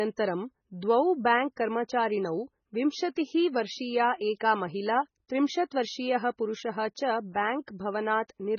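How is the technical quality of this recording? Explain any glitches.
Quality is poor: heavy MP3 compression affects the whole clip. The encoder was likely starved of bits, consistent with a rate near 16 kbps. It cut everything above 6.6 kHz and dropped weak frequency lines frame by frame, leaving the speech dull and watery, with swirling texture, metallic chirps on s sounds and smeared attacks.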